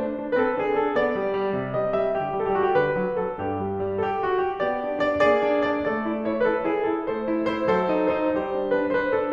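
Nothing stood out on listening to this music clip.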